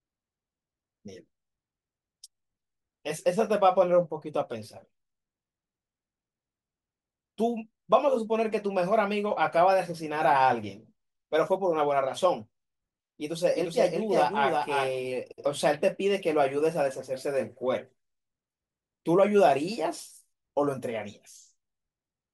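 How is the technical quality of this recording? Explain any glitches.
The recording has one glitch. From 13.55 to 14.91 s there is a doubled audio track: a second, full-band copy of the speech trails roughly 400 ms behind, about 5 dB quieter, likely from a slower capture path or a misaligned edit. It sounds like a dry, flat echo that switches on and off abruptly, with no decay.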